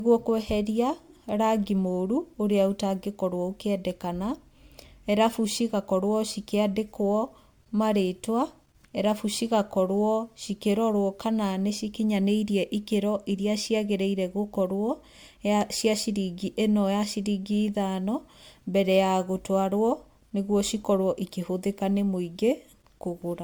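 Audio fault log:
Throughout: generation loss. The speech sounds swirly, smeared and hollow, more than a single lossy pass would explain. Consonant attacks blur and lose their edges. The likely cause is repeated MP3 decoding and re-encoding, around seven passes, each consistent with 128 kbit/s. Every pass quantises again on a shifted frame grid, so noise and spectral holes build up. The top end still reaches about 20.1 kHz, so the damage lies in the texture, not the bandwidth.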